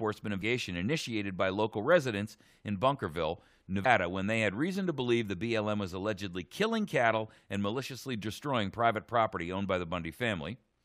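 At 0.41 s and again at 3.84 s, the audio breaks up for under 20 ms each time. These are brief events from damaged data in a compressed stream: corrupted bytes made the decoder misread or drop frames and lose sync until it found the next valid frame header.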